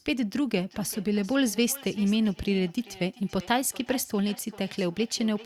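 From 0.57 s to the end of the speech, each word returns as feedback echo between two devices. A second device in the room replays what this microphone sent. The microphone picks that playback up again, and because its echo canceller only removes its own device's output, the sound loops back roughly every 400 ms, reaching about 20 dB below the speech. Each pass comes back thinner and more ringing than the last. That repeated, degrading return at a fixed interval is what separates it from a single room reflection or a one-off network echo.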